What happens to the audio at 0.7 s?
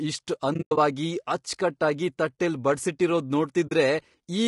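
At 0.7 s the sound falls into AAC frame loss with muting, which runs from 0.53 to 0.78 s. Across that 240 ms stretch, about 160 ms of audio is simply gone, in separate holes; the longest lasts roughly a tenth of a second. The decoder silenced each missing block, and the overlapping windows fade the sound out and back in, so the gaps are soft-edged dropouts. On a waveform they appear as tapered near-flat patches. On a spectrogram they are vertical bands that are empty at every frequency.

Around and through this moment the audio also has a rough, grainy texture, with noise filling the spaces between the harmonics. That points to low-delay AAC compression, likely AAC-ELD at a low bitrate of about 32 kbps. Its coarse coding leaves noise between the pitch harmonics, and the limited bits leave the upper band thin or synthetic. On a spectrogram the harmonic lines look smeared and speckled rather than crisp, with a coarse, patchy top band.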